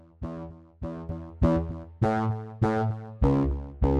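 A sudden gain jump arrives at 1.09 s and holds to the end: the level steps up by about 13 dB between one sample and the next, likely from a gain setting or bit shift applied without a ramp, so sound and background noise rise together at once.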